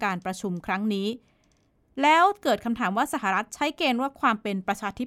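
No technical faults are audible.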